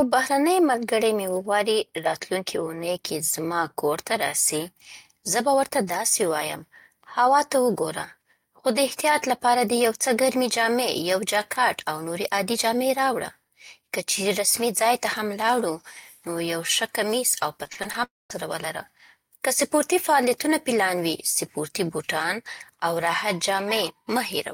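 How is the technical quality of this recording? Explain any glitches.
The recording has two network-related glitches close together, near the 18-second mark.

From 17.63 to 17.96 s, repeated packet loss (robotic sound): packets went missing five times in quick succession, and each hole was patched by extending the last sound. With about a third of that span concealed and gaps up to 39 ms, the speech turns choppy.

From 18.04 to 18.32 s, a long network dropout is the likely cause of a quarter-second hole. The last sound is briefly drawn out as a fading buzz or hiss, then about 190 ms of silence follows before the speech resumes with that portion missing.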